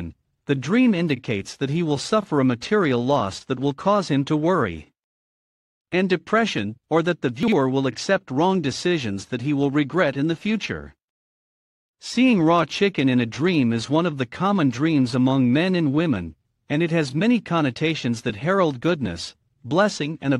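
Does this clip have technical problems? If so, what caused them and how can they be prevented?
Yes, there's a case of chunks out of order around 7.43 to 7.52 s. A block of audio about 46 ms long got written one chunk late, so it plays after the block that should follow it. Nothing's missing, but the swap leaves three hard joins, so you hear a brief jumbled moment. To prevent it, tag each buffer with a sequence number and reorder before playback or writing.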